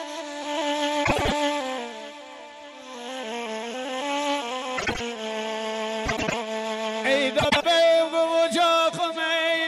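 Frames out of order occurs four times: at 1.04 to 1.33 s, 4.78 to 5.01 s, 6.06 to 6.34 s and 7.39 to 7.66 s. Each time, two neighbouring blocks of coded frames were delivered swapped and decoded in that order. The blocks are about 105 ms each, or 78 ms in the second event. Each stretch plays with its halves exchanged, heard as a brief garbled flutter, and no time is lost.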